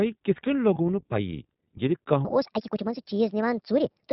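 From start to finish the speech passes through the iLBC codec, and the damage is plainly audible. Nothing above 4 kHz survives, so the sound is narrowband and muffled at the top, and the independent coding of each frame's excitation leaves a slightly rough, synthetic texture on the voice. The behaviour fits iLBC's 15.2 kbps mode with 20 ms frames, where every frame is decoded with no reliance on the one before.

At 0.74 to 0.78 s comes a 20 ms dropout from lost iLBC frames, which fits a single lost packet. The decoder fills the gap by repeating the last pitch cycle blended with noise, so for that instant the sound turns into a brief held, faintly buzzy tone in place of the real signal. Since iLBC frames are self-contained, the voice snaps back to normal on the very next frame without any lingering smear.

From 2.25 s to the end the audio plays as a section at the wrong speed, running 1.47 times faster than it should. 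Speed and pitch rise together, lifting the voice by about seven semitones, so it sounds high and hurried, and the change arrives abruptly at that point rather than ramping in. The likely cause is an editor or player resampling this part to the wrong clock rate.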